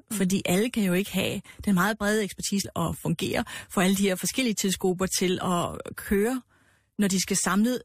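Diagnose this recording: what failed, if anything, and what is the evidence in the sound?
At the network and playback stage, a stream segment was likely skipped: one chunk of the segmented stream never arrived and the player moved straight on. At 2.64 s the speech jumps abruptly forward with a brief blip, and a stretch of the programme is simply missing.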